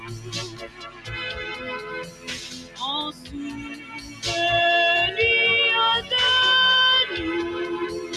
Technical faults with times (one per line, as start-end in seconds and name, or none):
0.00-8.16 mains hum
0.00-8.16 noise suppressor applied to music or sounds
0.00-1.09 sound cut by the noise suppressor
2.04-2.80 sound cut by the noise suppressor
3.12-3.34 sound cut by the noise suppressor
3.73-4.24 sound cut by the noise suppressor